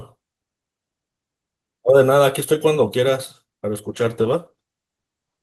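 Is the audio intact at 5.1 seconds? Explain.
No. At 5.1 seconds the speech is inside a call bitrate drop that runs from 3.89 s to the end of the clip. The call's bandwidth estimate fell, so the encoder was told to drop from 32 kbps to 14 kbps and coded the speech more coarsely, giving a rough, watery, duller sound. Unlike packet loss, this produces no gaps, clicks or robotic repeats, just a steady loss of detail lasting about 1.5 s.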